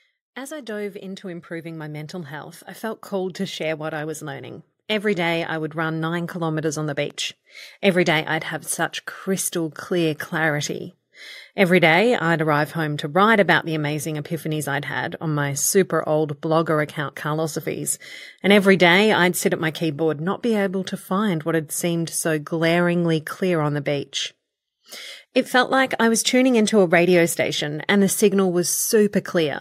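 From 0.47 s to 9.83 s, the level climbs steadily. This is automatic gain rising. The gain control judged the incoming speech too quiet and kept turning itself up. Over those nine seconds the gain increases by about 15 dB. The rise is slow, so there is no jump. The speech and the background noise swell together. The room noise grows as loud relative to the start as the voice does.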